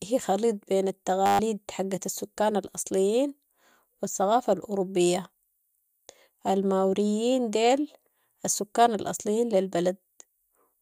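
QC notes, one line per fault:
1.26–1.39 s, system hang loop: after "هي خليط بين" the speech turns into a steady 100 Hz buzz, with a 10 ms slice of audio repeating over a dozen times because the system stalled while the output hardware kept replaying its buffer. About 150 ms of speech is lost before "حقت السكان الاصليين".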